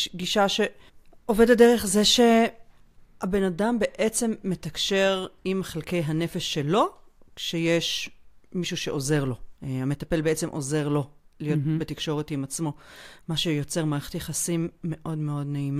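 Nothing in this speech recording stands out as a technical fault; it just runs along without a hitch.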